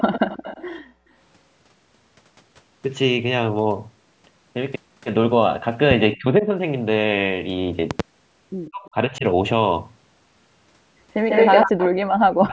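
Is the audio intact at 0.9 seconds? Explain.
No. From 0.82 to 1.1 s the echo canceller clamped the microphone while the loudspeaker played, so the background gating shows as room sound dipping by up to about 32 dB before returning.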